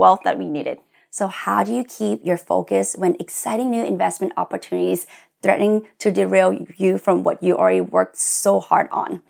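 Nothing in this recording stands out as a technical fault, so there's really nothing to flag here.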